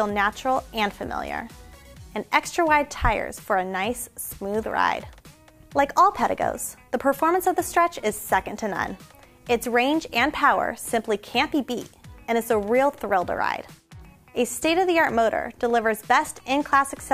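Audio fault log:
Nothing stood out on listening to this clip.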